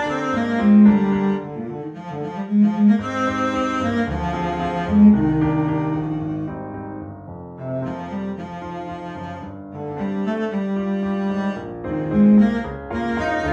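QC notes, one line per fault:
throughout, resampler restarted on every block: steady ticking at 10 Hz, since each 100 ms block was converted separately and every block edge carries a small error, which fits 48 kHz to 44.1 kHz conversion.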